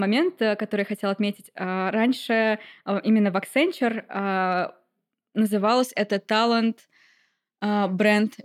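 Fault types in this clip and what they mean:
Channel delay (comb filtering): one channel arrives a tiny fraction of a millisecond late, which fits a lag of about four samples, so summing to mono cancels the shared content at evenly spaced frequencies, the first around 7 kHz. The speech sounds hollow in the upper range from the start until just before "это талант". Unlike a low-pass cut, the top is notched at a fixed point rather than rolled off.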